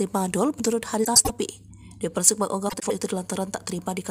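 At 1.04–1.30 s and 2.69–2.92 s, frames out of order: two adjacent blocks of roughly 105 ms, consistent with four-frame runs, play swapped, giving a garbled flutter.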